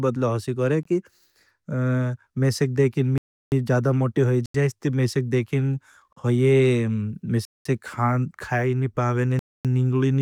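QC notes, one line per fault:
0.83–9.65 s, block of digital silence: six dropouts where the speech drops to silence with no fade, at 0.83–0.85 s (21 ms), 3.18–3.52 s (341 ms, just before "जादा मोट की"), 4.46–4.54 s (85 ms, before "जाए इसते मेशेक"), 6.13–6.17 s (38 ms), 7.45–7.65 s (202 ms) and 9.39–9.65 s (256 ms, after "नी पावेने"). The sound cuts out and back abruptly, so the longer gaps are heard as holes. This points to the output buffer not being filled in time. The 341 ms and 85 ms gaps fit 16384- and 4096-sample blocks at 48 kHz.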